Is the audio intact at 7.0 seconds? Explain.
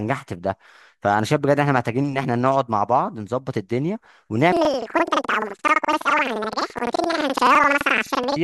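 No. At 7.0 seconds the speech sounds an octave high with a flutter at about 11.7 Hz. The cause is planar audio read as interleaved, running from 4.52 s to the end. Each 85.33 ms block, which fits a 4096-sample block, plays twice at double speed.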